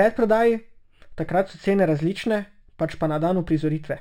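Imaging from linear upsampling runs throughout the speech, which fits a 12 kHz source raised to 48 kHz by straight-line interpolation. The top of the band is dulled, and a mirrored copy of the spectrum at 6 to 12 kHz, about 35 dB down, adds a faint metallic shimmer to sibilants.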